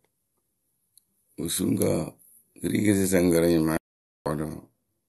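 The audio input was likely cut off briefly, through a lost link, disconnected device or stray mute, while recording continued, producing an audio dropout to silence in this speech clip. Just after "kɨ ri kɨsɨsǝŋkǝ rɨ", the sound stops dead from 3.77 to 4.26 s, leaving 0.49 s of silence with no room tone, and whatever was said there is lost.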